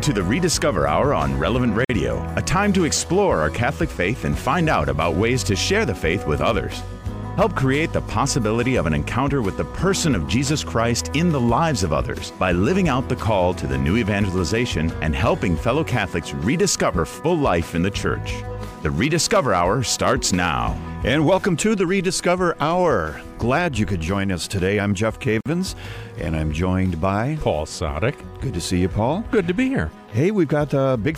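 At 1.85 s and 25.41 s, a gap at a join of encoded pieces: 48 ms and 51 ms of untrimmed encoder padding, with smeared edges. Unlike a dropout, the sound then resumes exactly where it stopped.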